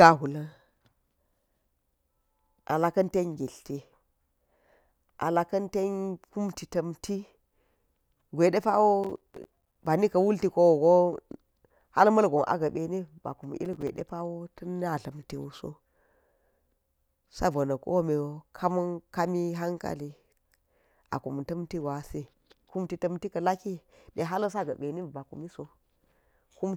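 From 9.04 to 9.76 s, and again from 13.65 to 14.01 s, the speech is torn by processor overload crackle: the processor misses buffer deadlines in rapid succession, and each missed block plays as silence. The dropouts are very short, which fits buffers of around 5 ms, and their hard edges produce a gritty crackle. On a waveform these stretches are riddled with tiny flat gaps; a spectrogram shows dense vertical broadband stripes.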